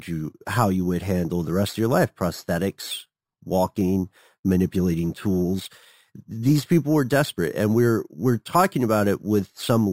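Right from the start and all the way through, this speech has imaging from sample-and-hold upsampling. The rate was raised by simply holding each sample instead of interpolating with a proper filter, so mirrored copies of the spectrum leak in. The first image sits between 6 and 12 kHz, which fits a 12 kHz source, at about 21 dB below the signal. You hear it as a metallic fizz riding on the speech, swelling and fading with it.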